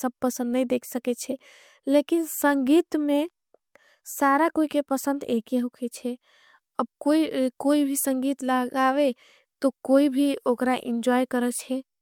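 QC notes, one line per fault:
No faults heard anywhere in this speech clip.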